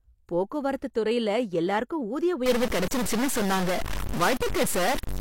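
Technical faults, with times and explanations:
0.94 s, 2.87 to 2.91 s and 4.37 to 4.40 s, pre-echo. A brief hiss arrives just before a sharp attack. It spreads 16 ms ahead at 0.94 s, just before "துறைல எல்லாருக்கும் ஊதிய", then 35 ms and 33 ms at the later two. A transform codec shares its quantisation noise across a whole block. Here the attack sat late in the block, so noise sized for the loud part leaked into the quiet lead-in. The onset loses its crispness.
2.46 s to the end at 5.20 s, stuck bit. Right after "போக்குவரத்து துறைல எல்லாருக்கும் ஊதிய", a distortion appears and stays until the clip ends. The likely cause is one data bit held fixed by a broken line or converter. About half of all sample values then land off by that bit's weight, in a pattern set by the waveform itself. The error also flips with the sign of small values, so quiet moments carry noise too.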